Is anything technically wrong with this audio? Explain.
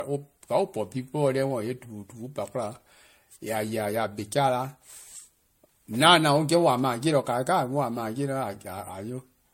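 Yes. Throughout, the speech sounds swirly, hollow and smeared, with blurred attacks and nothing above 16.6 kHz: generation loss, likely from around seven passes through 64 kbit/s MP3.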